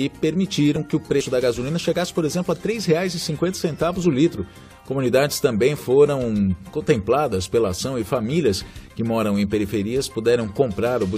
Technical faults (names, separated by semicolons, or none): damaged data in a compressed stream